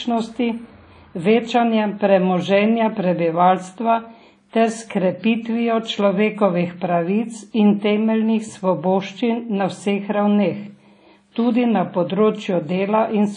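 From start to finish, the speech carries audible codec damage, most likely WMA compression. Nothing is present above 10.1 kHz, so the top end sounds dull and clipped off. The transform coder spreads its quantisation noise over long blocks. That gives a ringing, washy smear around each sound. A hiss rises and falls with the signal. Weak detail drops out entirely. The degree of damage fits a low bitrate around 32 kbps.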